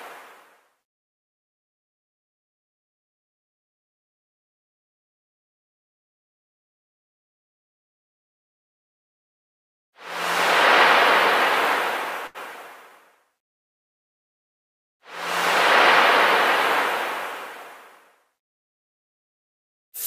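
At 12.27 s the sound briefly stalls until 12.38 s. A short stall from a late packet left the jitter buffer empty. About 80 ms was held and filled, with nothing lost, adding 80 ms of delay.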